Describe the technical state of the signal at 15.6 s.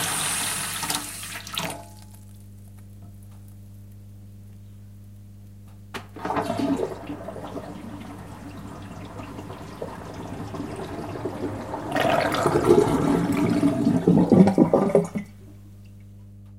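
At 15.6 s the signal carries mains hum. It is not confined to that moment; it runs through the whole clip. A ground loop or a nearby transformer is letting the power line leak into the signal path. The result is a steady low tone at 50 Hz, with some low harmonics above it. It sits roughly 20 dB below the wanted sound, as a constant drone underneath.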